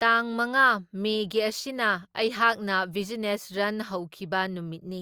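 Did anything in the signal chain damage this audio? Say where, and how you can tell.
No, nothing in the signal chain has left an audible mark on this speech recording. There is no audible sign of trouble in the wiring, conversion, processing, transmission or playback stages.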